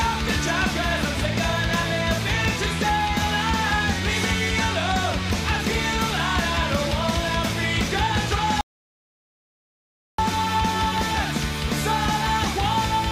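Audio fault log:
8.61 to 10.18 s, audio dropout to silence. The sound stops mid-flow and the track falls to silence for about 1.6 s. No room tone or background remains in the gap. Then the sound resumes abruptly, again mid-flow. This points to the input being lost while writing continued, with silence filling the gap. A disconnected device or broken link is the likely cause. Whatever was happening during those 1.6 s is gone.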